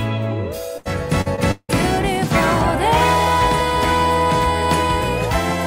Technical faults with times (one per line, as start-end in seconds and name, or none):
0.77-1.85 repeated packet loss (robotic sound)